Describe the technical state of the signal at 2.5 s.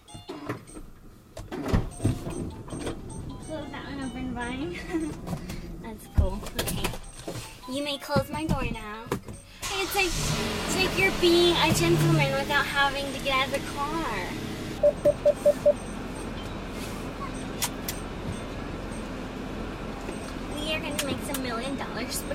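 At 2.5 s the signal is intact, with no dropout, distortion or other fault to be heard.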